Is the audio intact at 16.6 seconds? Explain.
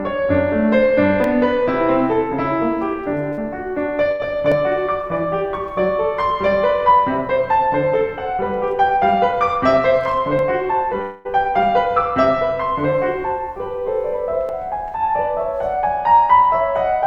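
Yes, the music is intact at 16.6 seconds, with no audible fault at that moment.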